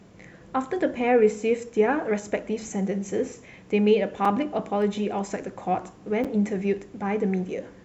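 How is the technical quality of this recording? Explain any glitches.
Three brief glitches interrupt the speech: two dropouts and one sharp snap.

At 4.25 s and again at 6.24 s there is a block of digital silence, lasting about 5 ms and 7 ms. The output stream went silent, which points to the buffer not being filled in time. The audio stops and restarts with no fade, so each hole is heard as a tick. A waveform shows a flat, near-silent stretch with vertical edges. On a spectrogram each edge appears as a thin full-height stripe.

At 4.82 s a single sharp snap sits on top of the speech. It is most likely an electrical switching spike, an arc from a nearby switch or static discharge coupling into the audio line. Unlike the dropouts, nothing is removed and the spike is added to the signal. The waveform shows one narrow spike standing above the surrounding level, and the spectrogram shows a lone broadband vertical line.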